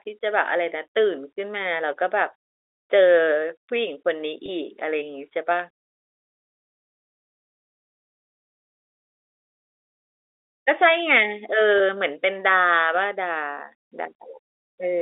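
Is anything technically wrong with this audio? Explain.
Yes. There are two brief episodes of packet loss with pitch repetition, at 4.46 to 4.48 s and 11.78 to 11.80 s. Each time a gap of about 20 ms, consistent with a single dropped packet, went missing from the G.711 telephone stream. The receiver filled it by repeating the last pitch period, so each gap comes across as a momentary held, slightly buzzy tone before the speech resumes.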